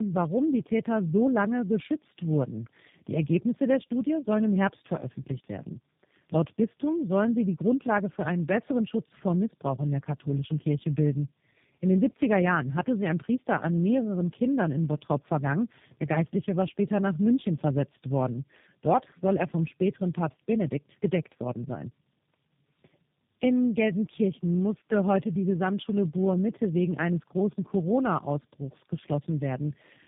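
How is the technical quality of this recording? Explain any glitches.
The quality is poor throughout, from tandem speech coding. Two low-rate speech coders seem to run in series, which fits an AMR-NB stage feeding G.729A. The second coder re-encodes the first one's damage. Speech sounds rough, muffled and warbly, with nothing above 3.7 kHz.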